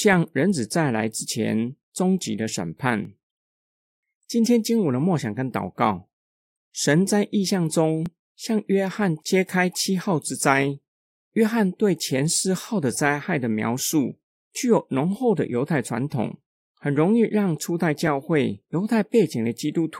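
At 3.05 s and again at 8.06 s there's a quick tick from overlapping chunks: each new 5-second chunk starts about 7 ms before the previous one finished, so that sliver plays twice at the join, giving a small stutter exactly 5 s apart.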